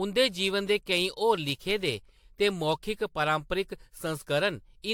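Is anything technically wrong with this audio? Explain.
Yes. Throughout the speech there's generation loss: a swirly, hollow smear with blurred consonant attacks and nothing above 19.3 kHz. It's likely from around five rounds of AAC-LC re-encoding, fitting roughly 96 kbit/s, each pass piling fresh quantisation noise onto the last.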